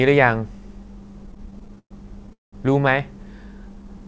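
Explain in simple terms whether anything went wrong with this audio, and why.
Repeated stalls (stutter) run from 1.24 to 2.55 s. The speech keeps catching and dragging, with 18 short hold-ups in that stretch, the longest about 0.2 s. Pieces of the call arrived late, so the receiving end kept running out of sound to play. Each time, it stretched the last sound, fading it on the longer waits, until more arrived. No speech is lost, but about a third of that stretch is filler.

A jitter buffer slow-down follows from 3.69 to 4.01 s. The speech plays at about 90% of normal speed but keeps its pitch, so sounds come out drawn-out. The buffer that evens out late-arriving audio was running low or had just raised its target delay. To rebuild a small reserve, the receiver repeated tiny slices of the sound several times in a row. That added about 39 ms, and the audio sounds slowed rather than deeper.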